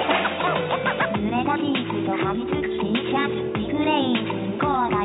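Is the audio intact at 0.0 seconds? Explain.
Yes, the audio is intact at 0.0 seconds, with no fault present at that moment.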